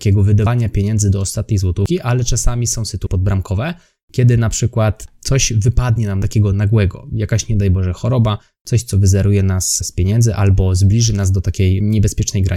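At 0.46 s, 1.86 s, 3.07 s and 6.22 s the speech jumps abruptly forward with no gap of silence. Each jump skips about a tenth of a second, except the one at 3.07 s, which loses roughly a third of a second. This is likely a dropped buffer (overrun): the capture side fell behind, the hardware overwrote unread samples, and the surviving audio was spliced end to end.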